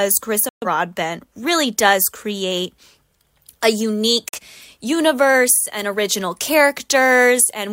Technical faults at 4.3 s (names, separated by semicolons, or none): digital broadcast dropout